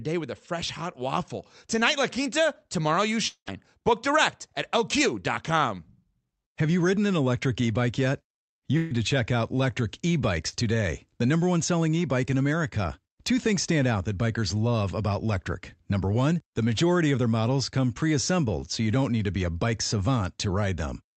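From 3.27 to 3.49 s, the sound is stretched into a fading buzz or hiss, then goes silent for about 90 ms. This is a long network dropout, likely, with roughly 200 ms lost. The drop to real silence is what sets it apart.

From 8.77 to 8.93 s, a burst of packet loss removes 140 ms. The last sound is held and fades but never reaches silence before the audio resumes further on.

At 10.49 to 10.55 s and 18.61 to 18.64 s, short concealed packet loss fills 40 ms and 20 ms gaps. Each is heard only as a brief smear, far shorter than a fade.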